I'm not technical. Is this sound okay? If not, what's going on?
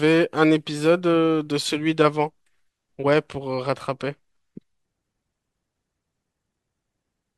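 Yes, this recording is technically sound, with nothing going wrong in the signal at any point.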